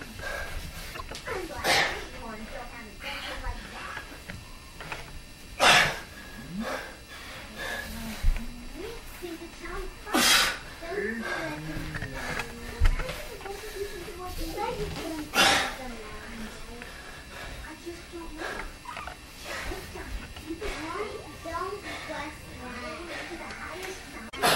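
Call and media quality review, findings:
Damaged data in a compressed stream, 0.90–1.01 s and 24.28–24.36 s: decoder loses frame sync and searches for the next frame header. Spectrogram shows broadband smear; waveform has a discontinuity.

Repeated buffer, 5.68 s and 8.06 s: playout underrun replays a 1.45 ms block, consistent with a 64-sample buffer. The result is a click or short buzz, seen as identical periodic waveform segments with a few milliseconds lost.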